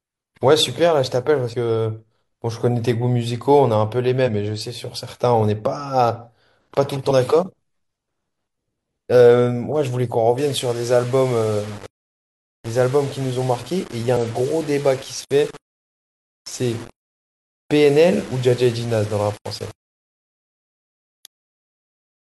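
At 1.49 to 1.54 s there's a quick glitch: damaged data in the compressed stream, so the decoder lost sync and jumped to the next frame. From 10.38 s to the end, the speech turns grainy and gritty, with the grit tracking the voice, sitting roughly 25 dB down. It's likely low bit depth without dither, around 6 bits, rounded.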